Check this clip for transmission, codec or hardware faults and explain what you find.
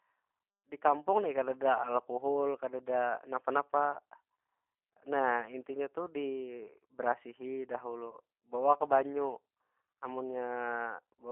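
Two faults are audible: a low-bitrate speech codec throughout, and one brief packet-loss gap late in the clip.

G.729 codec, throughout: speech is rebuilt from a filter, pitch predictor and sparse pulses, consistent with an 8 kbit/s stream, limited to about 250 Hz to 3.4 kHz, sounding plainly rough and synthetic.

VoIP packet loss concealed by the speech codec, 8.11 to 8.16 s, just after "nah intinya tu dibarasihi": the decoder extrapolates over a 20 ms gap, one lost packet, stretching speech into a fading buzzy tone or coloured noise.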